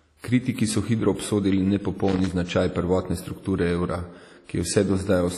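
WMA-style compression runs throughout the speech. The audio has a ringing, washy quality, with hiss that rises and falls with the signal, and it carries nothing above 15.5 kHz. The codec damage is heavy and most likely comes from WMA compression. A transform codec with long blocks spreads its quantisation noise over tens of milliseconds around each sound, and at a low rate, one that fits about 32 kbps, weaker spectral lines are dropped entirely.

Loose connector crackle breaks in from 2.08 to 2.32 s, an irregular burst of crackle and scratching lasting about a quarter of a second. A worn or dirty contact in the signal path was making and breaking in quick succession as it moved. Each break chops the signal, and each reconnection can add a pop if DC is present on the line, which gives the ragged, scratchy texture of the burst.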